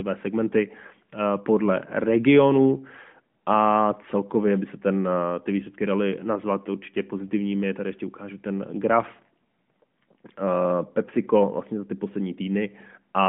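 No faults can be heard in this speech recording, which carries the narrow telephone band of an AMR narrowband mobile codec running as expected, with roughly 150 Hz to 3.4 kHz present, nothing above about 3.7 kHz, and only the light coding texture that fits its 12.2 kbps mode.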